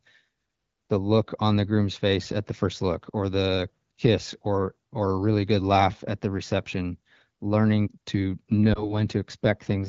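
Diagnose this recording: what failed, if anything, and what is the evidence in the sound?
Lost AMR speech frames on the radio link: after "the reception learning to", one 20 ms frame at 8.73 s becomes a brief dip or warble, not a silent gap, recovering by 8.91 s.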